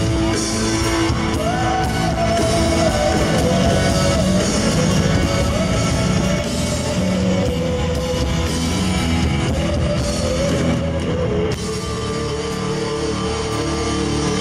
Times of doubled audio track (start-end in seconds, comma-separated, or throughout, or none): 2.41-6.39